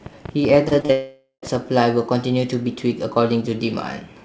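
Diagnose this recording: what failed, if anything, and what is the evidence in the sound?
A train of clicks runs from 0.06 to 1.56 s: roughly fifteen similar-shaped pulses at an irregular pace, averaging 10.7 per second and peaking about 5 dB above the speech. The likely source is electrical interference or a struggling interface at the analogue or driver stage.

Short concealed packet loss occurs at 0.68, 0.80 and 0.86 s. Each time about 30 ms of the G.722 call stream (64 kbps, nothing above 8 kHz) failed to arrive, and the receiver extended the preceding sound, leaving a brief smear before blending back into the real audio.

From 0.92 to 1.45 s the sound stretches into a fading buzz or hiss for about half a second, with the final 110 ms silent, and then resumes without the missing material. A long network dropout is the likely cause, with the jitter buffer concealing until the stream returned.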